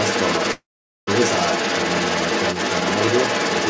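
A short speech clip with two problems. For the whole clip, from 0.0 to 3.69 s, a second voice runs underneath the main talker at about the same level, so it's hard to tell which voice is meant to be in front. That's other side's voice leaking through, most likely the far end playing out of the talker's loudspeaker and the echo canceller failing to strip it from the mic signal before sending. The other fault is a call audio freeze from 0.52 to 1.09 s. The sound stalls, the last bit gets stretched into a fading tail, then roughly 450 ms of silence follows before things pick up again. The audio resumes exactly where it left off, so about 550 ms of gap has been inserted with nothing lost, and everything after it lands that much later. That pattern points to packets likely held up in transit, leaving the jitter buffer empty until they arrived. The top end stops at 8 kHz, which is just the normal ceiling for a G.722 call at 64 kbps.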